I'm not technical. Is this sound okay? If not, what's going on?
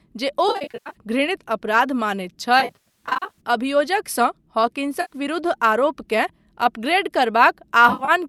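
No. The speech has AAC frame loss with concealment at 0.49–0.95 s, 2.60–3.40 s, 5.01–5.13 s and 7.89–8.11 s. Bits of the audio went missing, and the player guessed to fill them, so those patches sound smeared and noisy instead of dropping to silence or clicking.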